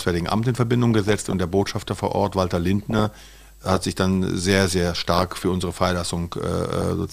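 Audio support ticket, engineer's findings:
DAB burbling at 0.90–1.33 s, 2.82–3.77 s (before "sich dann sehr sehr"), 5.16–5.44 s (after it), and 6.77–6.82 s. MP2 decoder fed residual bit errors, around half a percent, so wrong samples give noise blips in single sub-bands and wrong scale factors make sub-bands jump in level for up to a frame, over the speech.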